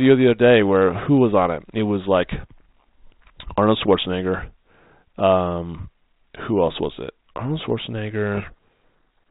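At 8.34 to 8.55 s the speech drowns in harsh distortion, a codec payload misread where the G.726 code words arrive with their bit order reversed.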